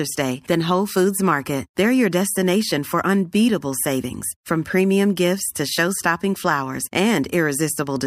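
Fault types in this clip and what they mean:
No faults detected.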